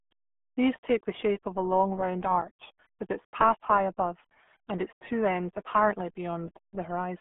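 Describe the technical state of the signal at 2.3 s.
At 2.3 s the speech carries the RealAudio 14.4 codec fault, present throughout the clip. Heavy low-bitrate coding, fitting roughly 8 kbit/s, confines the speech to about 200 Hz to 3.5 kHz with nothing above 3.7 kHz, so it sounds muffled and gargly.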